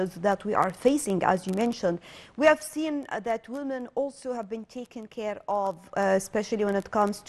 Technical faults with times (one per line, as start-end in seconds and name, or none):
1.73-3.14 zipper noise
5.76-6.12 zipper noise